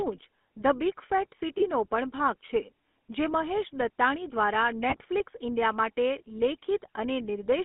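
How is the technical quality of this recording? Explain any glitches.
The speech is held back by a telephone codec throughout, with two short glitches.

Throughout, the voice has a buzzy, gravelly roughness and a narrow band of roughly 200 Hz to 3.5 kHz. This is the GSM full-rate codec, which fits a 13 kbps stream and rebuilds the voice from a vocal-tract model driven by sparse pulses.

From 1.58 to 1.64 s, just before "પણ ભાગ છે જે", and again from 4.90 to 4.96 s, a brief metallic ring takes the place of the speech. These are lost GSM frames, each about 20 ms of missing data, replaced by repeating the last good frame.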